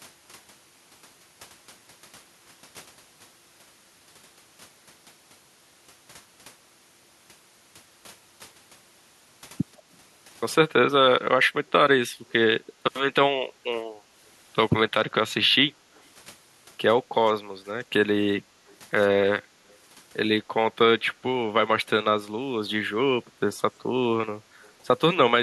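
Three brief, very faint repeats of the speech trail behind the live talking, at 19.68 to 19.76 s, 23.53 to 23.57 s and 24.63 to 24.69 s, each arriving about 147 ms late and sitting far below the direct speech. These are echo leak: the far end is likely playing the call through a loudspeaker, and its echo canceller let small scraps of what its microphone picked up slip back down the line.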